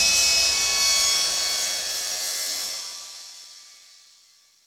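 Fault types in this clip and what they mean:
Block size mismatch (padded): from 1.13 s to the end, each block arrives short and its remainder is filled with zeros, so a gap repeats about 92 times a second. That gives a buzz at 91.9 Hz, and the sound runs slower at 0.919 speed with its pitch roughly unchanged.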